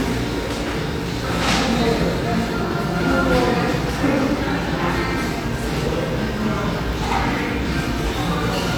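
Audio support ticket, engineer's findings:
Listened through the full clip: nothing stood out, no symptoms to log against any component.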